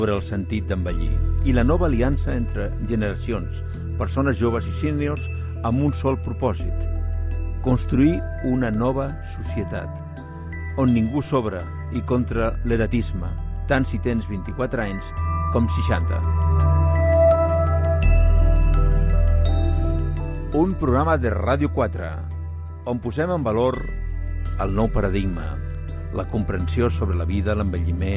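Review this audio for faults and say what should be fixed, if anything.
Nothing stood out on listening, so there is nothing here that calls for a fix.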